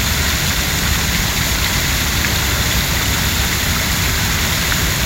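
No technical faults are audible anywhere in this recording.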